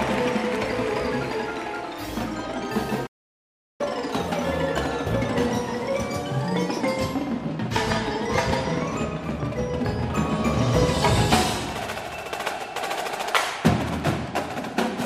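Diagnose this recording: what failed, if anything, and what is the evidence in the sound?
Playback stall from 3.06 to 3.81 s: the sound drops out for about 0.73 s at the playback stage, likely because the player's buffer ran empty or its thread was blocked.

Catch-up at higher speed from 3.81 to 6.81 s: the player resamples its backlog at 1.1 times normal speed, raising pitch by roughly one and a half semitones, then settles back.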